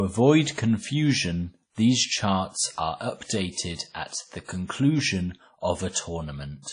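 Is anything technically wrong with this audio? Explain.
Yes. Throughout the speech there is plainly audible codec damage: a ringing, washy quality with a hiss that swells and fades with the voice, and nothing at all above 10.1 kHz. This is likely WMA compression at a low rate, consistent with around 32 kbps. Its long transform blocks smear quantisation noise over tens of milliseconds, and weak spectral lines are dropped to zero. A plain low-pass filter would remove the top end cleanly, without the breathing hiss and ringing heard here.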